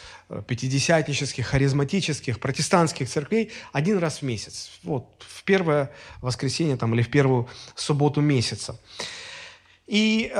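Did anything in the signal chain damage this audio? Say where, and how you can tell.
No, nothing in the chain damaged this speech.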